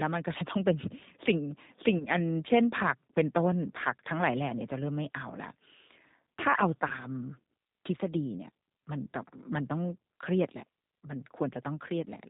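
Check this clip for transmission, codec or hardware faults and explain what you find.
Two faults are present: a low-bitrate speech codec throughout and two brief concealed packet losses.

Throughout, a G.729 codec rebuilds the speech from a vocal-tract filter, a pitch predictor and sparse pulses, consistent with 8 kbit/s. Nothing above 4 kHz survives, and the voice sounds plainly rough and synthetic.

At 1.98–2.05 s and again at 6.88–6.93 s, VoIP packet loss concealed by the speech codec occurs. About 20 ms of audio is missing each time, consistent with a single lost packet. The decoder extends its last pitch and filter at falling gain, so the sound is briefly stretched and fades, then stays weak for a moment after recovering.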